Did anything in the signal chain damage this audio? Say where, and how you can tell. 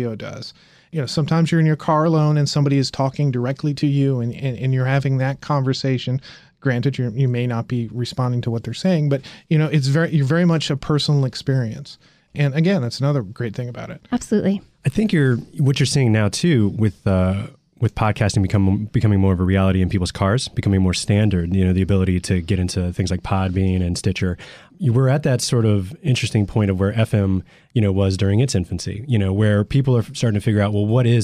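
Yes. Channel delay (comb filtering) at mono summing, 5.69 to 6.69 s, after "and you're having that". One channel lags a couple of samples. Cancellation notches around 10 kHz dull the top.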